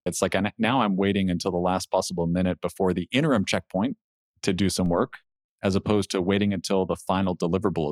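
At 4.86 s, between "checkpoint to do some" and "work as opposed to", the speech has a DC step. The waveform's zero line jumps by about -32 dBFS, giving a single low thump. The offset then drains away slowly through a 2 Hz high-pass. The speech carries on unchanged.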